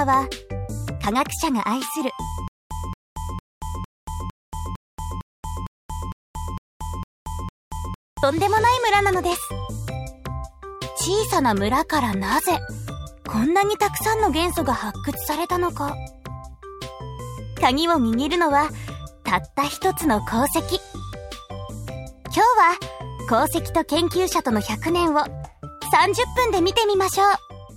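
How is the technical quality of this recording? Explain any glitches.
The recording has one clear fault, a stutter with silent gaps, from 2.48 s to 8.23 s. A fragment of about 225 ms plays, then about 230 ms of dead digital silence follows, repeating every 455 ms, twelve times in all. The likely cause is a stalled player or stream that replays its last buffered fragment on each retry before running dry. The audio due during that span is lost. Unlike random dropouts, the gaps here are evenly timed and the same burst returns each time.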